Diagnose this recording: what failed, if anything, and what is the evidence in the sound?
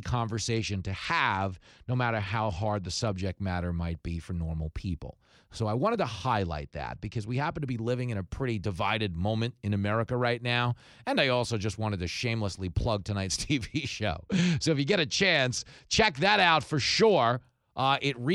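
The Bluetooth link's SBC codec stage failed intermittently: the sender cut its bit pool three times, a Bluetooth SBC bit pool drop each time. From 0.54 to 3.21 s (ending before "matter might be for"), 6.42 to 7.59 s (between "I wanted to" and "to be living in") and 14.13 to 17.45 s, the speech turns dull and gritty, which fits a fall from about 31 to 12. Starved of bits, the upper sub-bands vanish and the rest are coarsely quantised, until the rate recovers.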